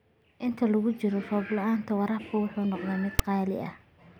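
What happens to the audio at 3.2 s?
At 3.19 s a block of file metadata is read as audio: text tags embedded in the file are fed to the decoder as if they were sample values. Character bytes make a skewed, repetitive waveform, so the result is a loud rasp pushed off to one side of zero rather than centred noise. It lasts only a few milliseconds, heard as a loud snap, the typical signature of file tags played as audio.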